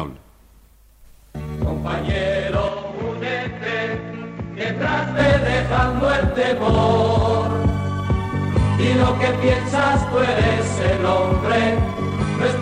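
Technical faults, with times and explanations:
0.65–0.69 s and 4.17–4.24 s, corrupt frame decoded: flipped bits in the compressed data went to the decoder, which played the damaged frames anyway, putting energy at wrong frequencies. The first, a single frame, is a faint blip. The second covers a few frames and is a much louder burst.
2.68–5.19 s, input switched to a poorer device: the input likely changed to a lesser microphone or headset path, cutting everything above 7.6 kHz. The sound turns duller and somewhat quieter, with a faint new background noise. There is no gap at the switch, and the tone clears again at 5.19 s.
12.19–12.24 s, compressed frames skipped: whole compressed frames were never played, either missing or rejected by the decoder, so the audio jumps ahead by about 50 ms.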